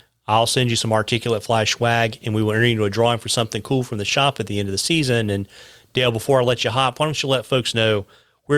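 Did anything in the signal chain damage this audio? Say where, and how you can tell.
No, nothing in the signal chain damaged this audio.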